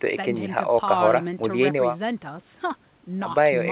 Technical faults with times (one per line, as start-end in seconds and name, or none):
none